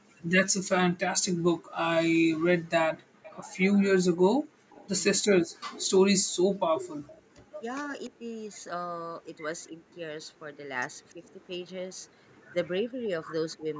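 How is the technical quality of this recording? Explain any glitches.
The recording has two recurring call-path faults, a leaking echo and clipped speech during overlap, both typical of a loudspeaker call.

Echo leak appears at 2.97–3.4 s, 4.7–8.09 s and 10.25–11.13 s. A copy of the speech trails about 0.29 s behind, roughly 25 dB down, then about 15 dB, then about 40 dB. This is likely a far-end echo canceller passing residual loudspeaker pickup back down the line.

Speech suppressed in double talk occurs at 5.2–5.25 s, 7.66–8.26 s, 9.69–9.97 s, 11.13–11.24 s and 12.93–13.69 s. The talker's level briefly sags or drops out, by as much as about 40 dB. This is likely the canceller mistaking overlapping talk for echo and attenuating everything. The call's microphone filtering leaves no content above 8 kHz.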